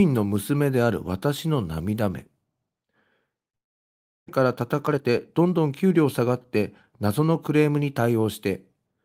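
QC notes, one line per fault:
3.55–4.30 s, long network dropout: audio likely stopped arriving for about 0.7 s, with about 0.4 s never played; the receiver filled the gap with a fading buzz, then near-silence before speech resumes.
4.38–7.51 s, jitter buffer speed-up: the receiver trimmed about 0.3 s of excess buffered delay by cutting short pitch-period pieces, so speech runs about 9% faster at unchanged pitch.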